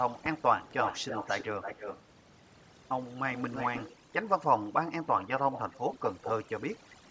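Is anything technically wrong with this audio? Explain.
Yes, two problems. Overdone noise removal runs throughout: the suppressor is set so hard that quiet speech detail vanishes with the noise, leaving a near-silent, twinkly background. Echo leak shows up at 0.18–0.42 s and 6.9–6.97 s as faint repeats, and at 0.64–2.02, 3.3–3.94 and 5.05–6.32 s as fairly strong ones, delayed by 216, 315 and 396 ms, likely a loudspeaker echo the canceller missed.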